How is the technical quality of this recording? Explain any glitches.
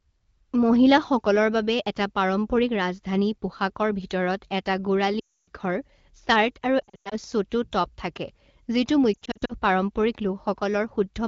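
Lost AMR speech frames cause three audible breaks in this wideband (HD Voice) call speech.

Around 5.19 to 5.48 s, a solid dropout of about 280 ms drops to near silence within two frames, consistent with roughly 14 consecutive 20 ms frames failing. From 6.80 to 7.16 s and 9.13 to 9.53 s, shorter gaps scattered over about 0.3 s and 0.4 s cause warbling dips, with the 100 ms run in the first of these briefly dropping to near silence. When a frame is lost, the decoder repeats the previous pitch and spectral settings at decaying gain, so speech resumes briefly weak.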